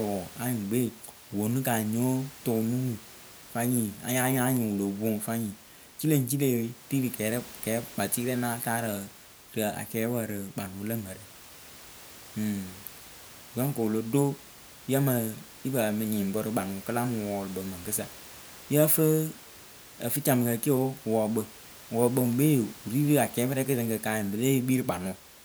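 No technical faults occur in the clip, so there is nothing to describe in time order.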